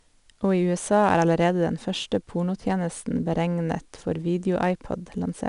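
4-bit ADPCM compression, throughout: each sample is a coarse adaptive step from a prediction, leaving plainly audible gritty hiss on the speech and nothing above 10.6 kHz.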